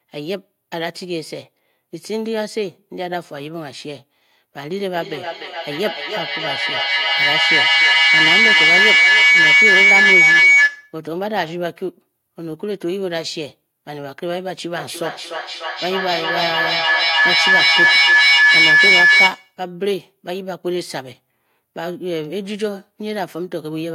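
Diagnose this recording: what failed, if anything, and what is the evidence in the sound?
A piercing tone rises out of the speech from 4.94 to 11.02 s, centred somewhere around 2 kHz, and again from 14.78 to 19.61 s, nearer 1.5 kHz. Both swell to about 11 dB above the talker and throb roughly every 0.3 s. This is feedback howl at the call stage: two devices in the same room on one call form an acoustic loop with gain above unity, so each pass reinforces one favoured frequency, and the pulse rate reflects the loop's round-trip delay.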